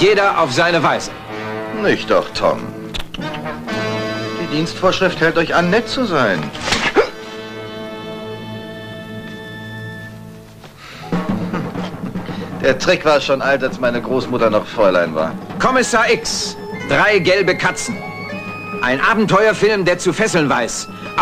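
No technical faults can be heard anywhere in this audio.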